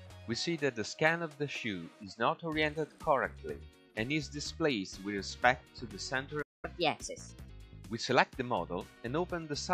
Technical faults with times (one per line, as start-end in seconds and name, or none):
6.42-6.65 playback stall
6.65-7.49 catch-up at higher speed